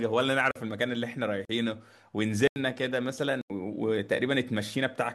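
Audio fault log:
0.51 to 3.50 s: block of digital silence, four times, at 0.51–0.56, 1.45–1.49, 2.48–2.56 and 3.41–3.50 s. The speech cuts to silence and back with no fade. The 43 ms and 85 ms holes fit unfilled 2048- and 4096-sample output buffers.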